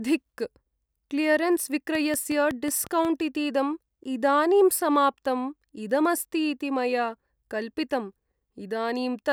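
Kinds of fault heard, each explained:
Train of clicks: from 1.95 to 3.06 s, just before "इतीदं इदानीं", a steady ticking runs over the speech, about seven near-identical pops arriving at an even pace of roughly 5.5 per second, each standing out at about 10 dB above the surrounding sound. Because the pulses repeat with the same shape and regular spacing rather than following the speech, they point to something outside the recording itself, likely interference from nearby equipment or a faulty connection or power supply injecting pulses.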